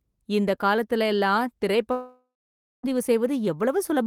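Right after "இந்த காலத்துல எல்லாம்", at 1.91 s, the speech turns into a fading buzz, then about half a second of silence, returning at 2.85 s with roughly 0.9 s of audio gone. That's likely a long network dropout, with the receiver stretching the last sound until it ran out.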